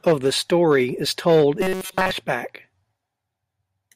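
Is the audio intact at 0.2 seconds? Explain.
Yes, at 0.2 seconds the speech plays through cleanly, with no dropout, click, distortion or other fault to be heard at that point.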